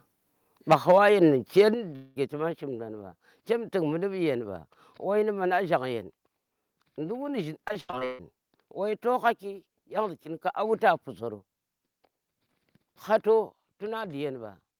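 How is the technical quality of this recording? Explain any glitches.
The recording has several clear technical faults, concentrated in the first two seconds, with further damage near 8 s and one late level change.

Microphone overload occurs from 0.71 to 1.09 s and again from 1.57 to 1.61 s. The loudest speech peaks go about 10 dB past the converter's limit in the first stretch and about 3 dB in the second, so their tops are flattened. Roughly 3% of samples are clipped in the first and roughly 10% in the briefer second. The cause is likely an input level set too high for the converter, and the result is a harsh, crackly edge on the strongest syllables.

Microphone volume stepped down happens at 0.73 s (about 4 dB), at 1.74 s (about 7 dB) and at 13.49 s (about 4 dB). Each is a sudden drop in level that affects both the speech and the background together. The first two come during or just after the distorted peaks, which points to call software likely reacting to the overload by cutting the device's input gain in a single step rather than by a gradual fade.

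A long network dropout runs from 1.95 to 2.18 s. About 200 ms of audio never arrives. The receiver fills that span by extending the last sound, which comes across as a fading buzzy smear with no true silence. Speech then resumes with that portion simply missing. This is likely a network interruption rather than anything at the microphone end.

Repeated packet loss (robotic sound) affects 7.68 to 8.21 s. Six separate gaps, the longest 139 ms, mean about 300 ms of audio is missing. Concealment patches 55% of that half-second span. Because each gap is bridged by repeating the preceding sound and another loss follows soon after, the speech turns choppy, with fragments lost between the artificial continuations.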